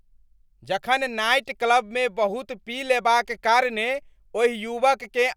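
Nothing in the way of a technical fault turns up anywhere in this bit of speech, so there's no timeline of problems to walk through.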